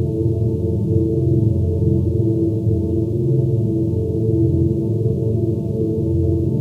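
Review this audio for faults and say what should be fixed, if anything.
No faults turn up in this audio, so nothing needs to be fixed.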